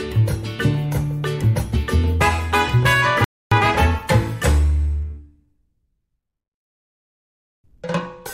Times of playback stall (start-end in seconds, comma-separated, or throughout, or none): 3.24-3.51